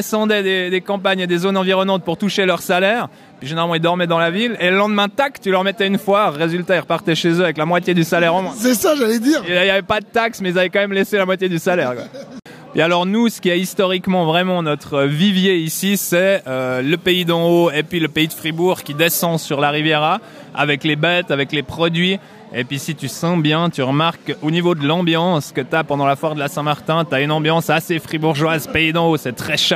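From 15.67 to 19.26 s, pre-emphasis is left on: the treble boost applied before recording or transmission was never undone by the matching de-emphasis. The rise, about 10 dB at 10 kHz relative to 1 kHz, fits a 50 µs FM curve. The sound turns thin, bright and hissy, with sharpened sibilance. On a spectrogram the upper bands glow noticeably brighter across that span, and the waveform shows spikier, more jagged high-frequency detail.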